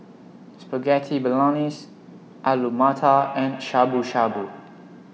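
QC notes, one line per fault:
3.12–5.13 s, feedback echo between two devices: speech returns at a fixed spacing of roughly 150 ms, peaking about 15 dB below the direct sound, as another device replays the call into this microphone. The spectrogram shows faint evenly spaced copies trailing each syllable.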